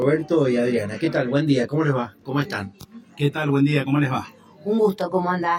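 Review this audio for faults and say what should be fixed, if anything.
Channel delay (comb filtering) runs through the whole clip: one channel arrives roughly 20 ms behind the other, and when the two are folded to mono, the shared content cancels at evenly spaced frequencies starting at around 20 Hz. The result sounds rough and slightly doubled. A spectrogram shows fixed horizontal notch stripes, close together, stacked up the spectrum from the start to the end. To prevent it, align the channels before any mono summing.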